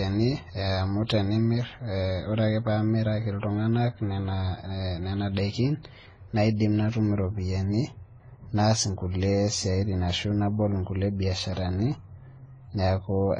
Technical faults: transcoding between lossy codecs

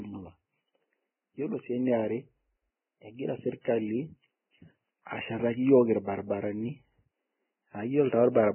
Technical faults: Vorbis compression; pre-echo

